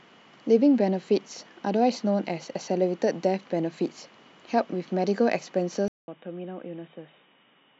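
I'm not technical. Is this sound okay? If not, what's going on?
No. At about 5.88 s the speech cuts out for a fifth of a second, then comes back duller, quieter and boxier until the end, with nothing above 3.8 kHz and a faint new background hiss. This is likely an input switched to a poorer device, such as a headset's call mode taking over. A simple tone filter would only muffle the sound. Here the loudness and background noise change too, right after a brief silence.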